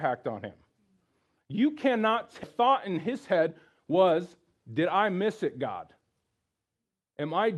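A skip ahead at 2.43 to 2.45 s drops about a second of speech. That much audio was dropped while later audio was already waiting, so playback jumps forward with no fill and the two sides of the cut butt together almost directly.

Jitter buffer speed-up follows, from 2.59 to 3.51 s at 117% speed and from 3.91 to 6.31 s at 107%. The receiver still held more audio than it wanted, so it trimmed pitch-period-sized slices again and again, removing roughly 150 ms and then roughly 200 ms. The speech sounds hurried at the same pitch, most noticeably in the faster first stretch. Throughout, the clip carries the Opus call path's coding noise and its cutoff at 12 kHz, and the sound quality points to about 32 kbps.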